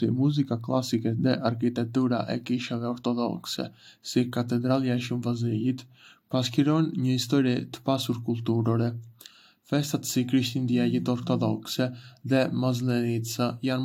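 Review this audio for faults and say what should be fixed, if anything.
No faults found; nothing to fix.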